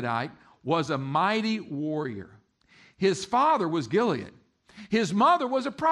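No technical faults can be heard anywhere in the speech.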